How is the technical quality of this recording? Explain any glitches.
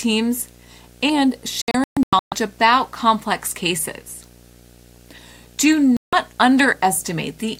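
The recording has two problems: a steady buzz under the whole thing and a couple of spots where the sound briefly drops out.

Video or display buzz runs right through the speech. A screen or video cable is coupling into the audio path, putting a 60 Hz buzz with a fizzy hash on top about 30 dB below the speech.

Then there's digital broadcast dropout. From 1.62 to 2.32 s the receiver kept losing good frames and muting, so about 0.45 s goes missing in several short holes, the longest about 0.13 s, before "about complex cases". At 5.97 to 6.13 s about 0.16 s goes missing. The hole sizes fit 32 ms frames, and whatever was said in those gaps is gone.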